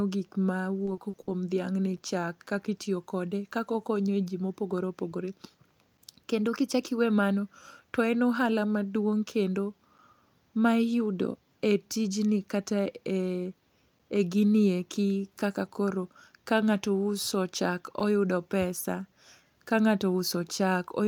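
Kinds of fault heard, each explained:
Repeated packet loss (robotic sound): Between 0.85 and 1.29 s, just after "gik ma", the speech turns choppy. Four holes open in quick succession, the longest 60 ms, and each is patched by extending the preceding sound, so roughly a third of that stretch is synthetic fill. Unlike clean chunk gaps, this leaves continued sound rather than silence, and the fills are concentrated in one short burst.
Gap between chunks: At 1.97 s (just before "chak kakitiyo kode"), 5.97 s, 13.99 s and 18.00 s (before "oyudo pesa"), a hole of about 7 ms cuts the speech. The holes sit on a 4-second grid, which fits audio delivered in fixed chunks with silence left at each join. No sound is replaced or smeared, which separates these holes from packet-loss concealment. They are brief clean dropouts that recur at regular intervals.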